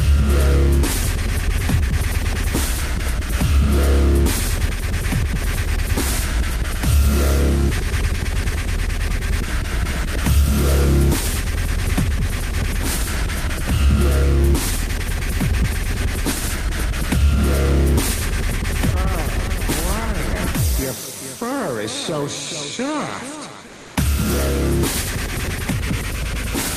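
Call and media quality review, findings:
Comfort noise in place of the background, 23.71 to 23.95 s. About 240 ms. Real background detail drops out, replaced by steady, featureless hiss. Level stays matched, no audible dip. Background sits about 23 dB under the loud passages, low enough to trip a voice activity detector. Likely cause: discontinuous transmission on the sending side, consistent with Opus DTX. Sender pauses packets, receiver fills the gap with synthetic shaped noise until sound resumes.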